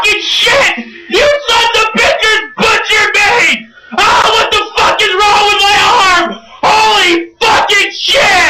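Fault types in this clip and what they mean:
Gap between stream segments: at 4.22 s, two segments' time stamps fail to meet, so the player fills 14.5 ms with silence and no audio is lost. The waveform drops abruptly to a flat line, and the spectrogram shows a thin, hard-edged blank stripe across all frequencies.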